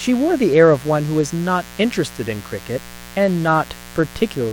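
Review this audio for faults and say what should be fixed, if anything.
Switching spikes from a 60 Hz supply are leaking into the signal path, laying a steady, raspy mains buzz under the speech throughout, roughly 20 dB down. Fix it by removing dimmers from the circuit, checking cable shielding and grounding, and keeping audio lines away from power wiring.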